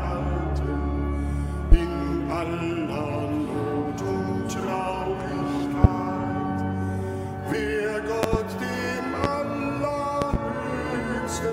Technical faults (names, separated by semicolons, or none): loud pop